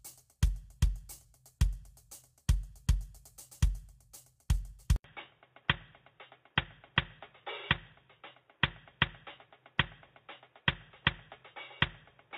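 Throughout the music there is plainly audible codec damage, most likely low-delay AAC compression such as AAC-ELD. Its short frames resolve harmonics poorly. Tones sound rough and grainy, with noise between harmonics. The damage fits a low bitrate near 32 kbps.

At 4.96 s the sound drops out for 80 ms. The input was likely switched to a poorer device. From then to the end, nothing reaches above 3.8 kHz. The music turns dull and boxy, a little quieter, over a faint new noise floor.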